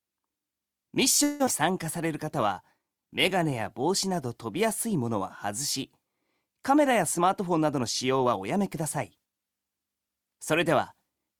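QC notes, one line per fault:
1.23–1.49 s, long network dropout: audio likely stopped arriving, so the last sound was stretched into a fading buzz for about 0.23 s, and roughly 140 ms never came back.
1.71–4.27 s, jitter buffer slow-down: the receiver repeated tiny pitch-period chunks to rebuild its reserve, adding 140 ms, so things drag at 95% speed, same pitch.
6.91–9.33 s, jitter buffer speed-up: with too much audio queued, it trimmed small pieces over and over, around 150 ms in all, running at 107% and sounding a bit rushed.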